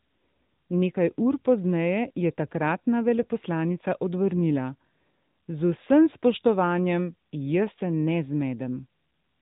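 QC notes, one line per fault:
Throughout, AMR narrowband mobile codec: speech stops above 3.8 kHz and has a clearly buzzy, synthetic edge from pulse-driven vocal-tract modelling, which fits a 10.2 kbps mode.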